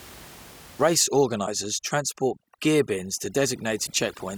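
From 0.96 s to the end, overdone noise removal is applied to the speech. The reducer cuts individual frequency bands hard wherever they sit near its noise estimate, so the room noise, about 23 dB below the speech, drops and breaks up into twinkling specks. Quiet speech components are removed along with it.

Damaged data in a compressed stream appears twice, at 1.43–1.48 s and 3.83–3.88 s. Corrupted bytes in those frames cause the decoder to misread them and lose sync while it searches for the next valid frame header, producing a brief disturbance at each point.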